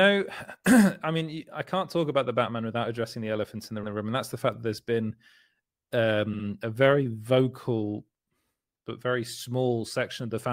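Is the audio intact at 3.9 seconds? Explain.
No, right around there you get repeated frames. Between 3.83 and 3.93 s, just after "the elephant in the" and before "room and that's the", a 100 ms chunk of the compressed stream got sent twice, so the decoder plays that slice one extra time. It comes across as a quick stutter. The clip ends up 100 ms longer, which fits a short run of codec frames duplicated.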